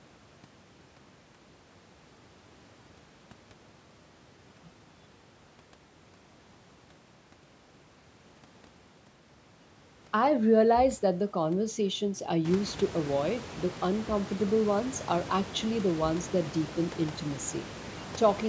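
No technical faults present.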